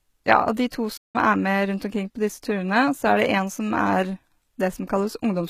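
From the start, the speech carries HE-AAC compression damage. The treble is likely rebuilt by band replication, not coded. Sibilants sound gritty and metallic. The damage is plainly audible, which fits a low bitrate near 20 kbps.

At 0.97 s there is a playback stall. The sound cuts out mid-flow and stays silent for about 170 ms, until 1.16 s. The likely cause is a player starved of data or briefly blocked. The speech then resumes.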